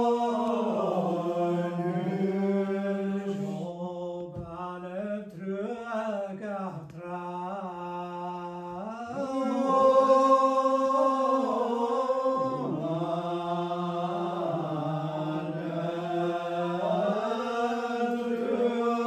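No technical faults are audible.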